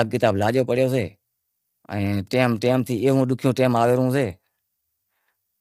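From start to finish, the speech sounds rough and grainy. Noise fills the gaps between harmonics, and the top band sounds thin and synthetic. The likely cause is low-delay AAC compression, whose short frames resolve pitch poorly. The damage fits a bitrate near 32 kbps.

From 1.97 to 4.31 s, Wi-Fi interference adds a steady ticking. A nearby radio's beacon, repeating every 102.4 ms, is rectified by the audio circuit. The result is about ten faint clicks a second, sitting well below the speech.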